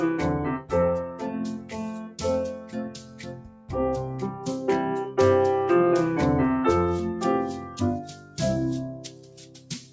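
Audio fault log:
throughout, noise suppressor applied to music or sounds: the level pumps and thins by around 10 dB as a speech noise suppressor treats steady tones and ambience as noise.
1.09–1.27 s, 1.54–2.22 s, 2.53–3.70 s, 7.60–7.77 s, 8.03–8.37 s, 8.94 s to the end, sound cut by the noise suppressor: held sound and decays sink by about 4 to 8 dB while onsets pass, because the suppressor mistook them for noise.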